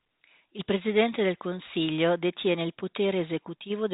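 No technical faults occur at any point in this speech, which carries the narrow 4 kHz band of ordinary G.711 telephone coding.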